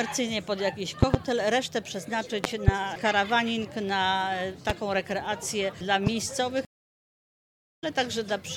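Right at 1.03 to 1.17 s there's a loud pop, actually a quick double hit, jumping about 20 dB above the audio. Another double lands at 2.44 to 2.71 s, louder at about 25 dB. Then come single pops at 4.70 to 4.72 s and 6.07 to 6.10 s, each around 20 dB over. The sound keeps running underneath each one, which points to a likely voltage spike getting added to the signal, from a plug, a switch, static or a driver glitch, with the downstream circuits rounding it into a sharp thump.

At 6.65 s there's a stream reconnect. The audio cuts to silence for about 1.12 s, and when it comes back at 7.84 s it has skipped ahead a little, roughly 150 ms past where it dropped. That's the connection breaking and the player spinning up a new decoder mid-stream. It sounds like a hard gap followed by a slight jump forward in the material.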